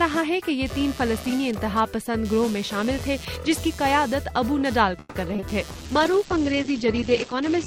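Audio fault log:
throughout: computer activity noise. A buzzing, pulsing interference with a repetition rate around 150 Hz sits roughly 20 dB below the sound and rises and falls independently of it. It follows the computer's workload: as the processor, graphics card or mouse draw varying current, the shared ground reference of the audio circuitry shifts, and those fluctuations leak into the signal as a buzz that tracks machine activity rather than anything in the recording.
4.99–5.44 s: repeated packet loss (robotic sound). Over this span the audio breaks up with a choppy quality as four holes open in quick succession. The longest lasts 160 ms. Nearly half the stretch, 47%, is synthetic fill: about 210 ms is covered by stretching the preceding sound forward, and another 80 ms is simply missing. Because each patch ends only shortly before the next gap, the extended fragments run together into a choppy, broken texture with pieces missing.
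5.72–7.66 s: call bitrate drop. From here to the end the sound turns muffled and rough, with a watery, smeared character. High frequencies vanish above 8 kHz, down from a 20 kHz bandwidth, and the coarser coding suggests the encoder fell from roughly 64 kbps to about 10 kbps after the call's bandwidth estimate collapsed. At that rate the codec gives up treble and fine detail to fit the budget, and the reduced quality lasts about 1.95 s, with no recovery before the clip ends.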